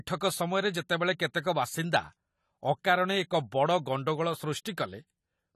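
From start to finish the speech carries AAC compression damage that is plainly audible, likely from a low-bitrate encode, with a sound that fits roughly 32 kbps. Nothing survives above 14.1 kHz, so the top is dulled, and sibilants and held vowels take on a fizzy, warbling smear as bands drop out and refill. A simple low-pass filter would only darken the sound; this shimmering, holey texture marks codec quantisation.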